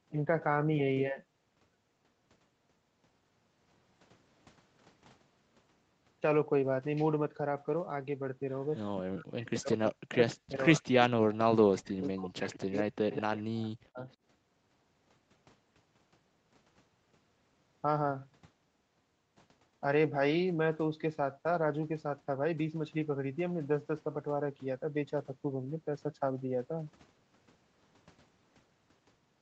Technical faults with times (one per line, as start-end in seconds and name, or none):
8.70-8.80 echo leak
9.02-10.94 speech suppressed in double talk
9.85-9.90 echo leak
10.30-10.66 echo leak
11.01-11.06 echo leak
11.55-14.05 speech suppressed in double talk
12.03-12.09 echo leak
12.73-13.17 echo leak